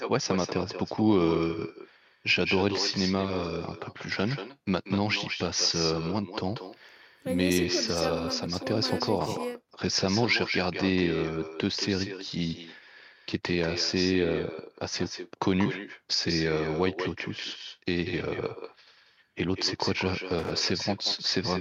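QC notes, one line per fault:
Throughout: echo with no canceller. The far end is playing the call over a loudspeaker and its microphone feeds that sound straight back, with nothing subtracting it. Every phrase returns around a fifth of a second later, about 8 dB down, as a thinner shadow trailing the speech.
20.39–20.51 s: loose connector crackle. A worn or dirty contact in the line is briefly making and breaking as it shifts, chopping the signal on and off. That produces a short, irregular burst of scratchy crackle lasting roughly a tenth of a second near the end of the clip.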